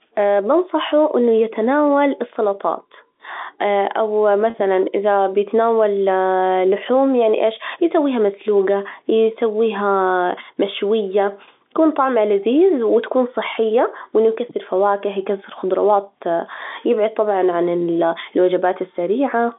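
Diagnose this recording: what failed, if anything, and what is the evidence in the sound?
The failure is in the network stage: packet loss with pitch repetition. At 4.5 s the speech briefly holds on one buzzy pitch for about 40 ms instead of moving on. That length fits two lost 20 ms packets. The receiver had nothing to decode, so it bridged the hole by looping the last pitch period it had. The gap is short, so the fill never fades to silence. It sounds like a small stuck tone inside the G.711 telephone band of 250 Hz to 3.7 kHz.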